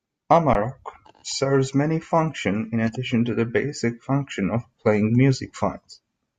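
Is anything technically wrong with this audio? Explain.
Yes. An underrun with held sample occurs at 0.54 s: the output buffer emptied, so the converter froze on its last value for 15 ms, flattening the speech, and about 15 ms of audio was skipped.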